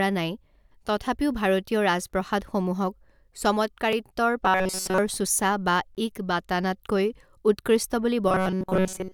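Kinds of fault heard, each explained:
Gap between stream segments: Two segment timestamps fail to meet, leaving hard-edged silent holes at 3.93 s and 5.95–5.97 s, two seconds apart, roughly 3 ms and 19 ms long. The waveform drops abruptly to a flat line; the spectrogram shows thin, fully blank vertical stripes.
Robotic sound from repeated short buffers: Speech becomes a rigid metallic buzz at 188 Hz from 4.45 to 4.98 s, and again over most of the stretch from 8.29 s to the end, likely from one buffer of about 5.3 ms being replayed. The waveform shows near-identical repeating cycles; the spectrogram, evenly spaced horizontal harmonics at 188 Hz.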